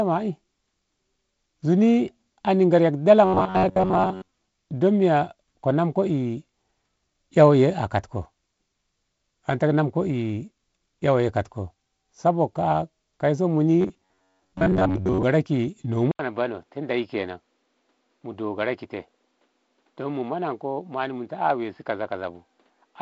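From 3.25 to 4.28 s, and again from 13.81 to 15.25 s, the speech goes robotic, with a stiff metallic buzz at 93.8 Hz. That's the sound of robotic sound from repeated short buffers: fresh audio likely wasn't arriving in time, so the same short chunk kept getting replayed while most of the real audio was dropped. A buzz at that rate fits a chunk of about 10.7 ms.

At 16.11 s there's an 80 ms gap, and from there to the end the input sounds switched to a poorer device, likely a different mic or a headset's call mode. Before the switch the sound reaches up to 7.7 kHz through the G.722 path. After it, the sound turns duller. The level drops by about 5 dB, and a new noise floor sits roughly 45 dB under the speech.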